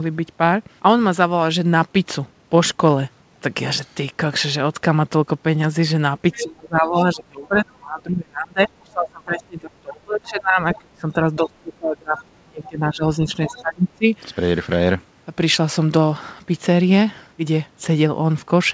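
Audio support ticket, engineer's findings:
Other side's voice leaking through: brief far-end fragments at 6.32–6.43 s, 10.73–10.78 s, 12.17–12.22 s, 13.47–13.61 s, about 10–20 dB under the talker. Likely residual loudspeaker echo the canceller missed.

Speech suppressed in double talk: talker level drops at 6.35–6.98 s, 7.14–13.29 s, 13.45–14.11 s, by about 30 dB at worst (about 20 dB in the last stretch). Likely echo canceller ducking both sides while the far end talks.

Band tops out at 8 kHz throughout, consistent with a wideband call codec.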